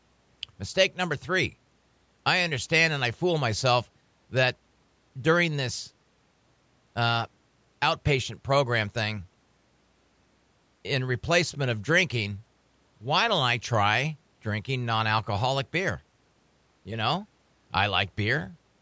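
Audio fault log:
No faults heard anywhere in this speech recording.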